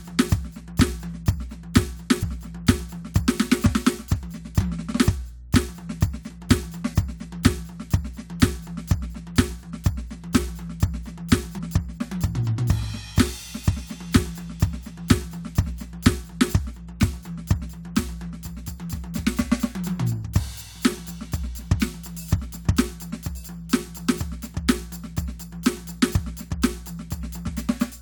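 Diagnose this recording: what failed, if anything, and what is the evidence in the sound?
Mains hum sits under the music for the whole recording, a steady 60 Hz tone with low harmonics, roughly 20 dB below the programme. The failure is in the analogue wiring: a ground loop or a nearby transformer let the power line couple into the signal before conversion. Unlike rumble or handling noise, which wander and spread across the low end, this tone holds one fixed pitch at the line frequency and never changes with the music.

Damaged data in a compressed stream shows up as two brief blips, at 2.22 s and 11.58 s. This is a codec-side fault in the stored or streamed file, not in the analogue chain. Corrupted bytes made the decoder misread those frames and lose sync until it found the next valid frame header. That produces a short glitch rather than the clean silence of a plain dropout or the repeated fragment of a buffer underrun.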